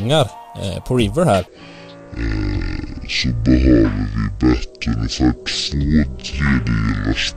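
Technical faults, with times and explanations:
1.47–7.36 s: section at the wrong speed. From 1.47 s to the end, playback runs at 0.54 times the original rate, so everything slows and drops roughly ten semitones together, turning deep and sluggish; likely a clock or sample-rate mismatch during editing or playback.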